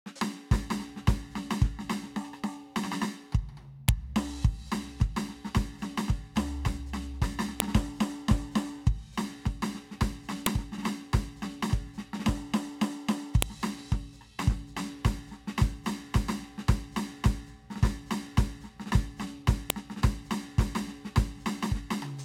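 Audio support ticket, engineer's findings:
File header played as audio: sharp snaps at 3.89, 7.60, 10.46, 13.42, 19.70 s in the music. WAV headers at segment joins were not stripped. The snaps are unrelated to signal level, unlike clipping.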